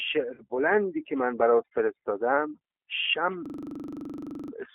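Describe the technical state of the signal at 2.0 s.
At 2.0 s the speech carries two faults, both running through the whole clip rather than starting or stopping near that point.

Overdone noise removal: a noise reduction stage set far too aggressively is shutting down individual frequency bands whenever their level sits close to what it takes to be noise. Low-level parts of the speech fall under that threshold and are cut along with the background. The background between sounds drops and breaks up into brief twinkling specks.

G.729 codec: the signal has passed through a G.729A voice codec, which fits an 8 kbit/s VoIP link. Instead of carrying the waveform, it rebuilds speech from a vocal tract filter, a pitch predictor and a handful of pulses per short frame, inside a telephone band of roughly 300 Hz to 3.4 kHz. The damage is plainly audible: the speech sounds boxed-in, slightly rough and synthetic, with no low bass or upper brightness.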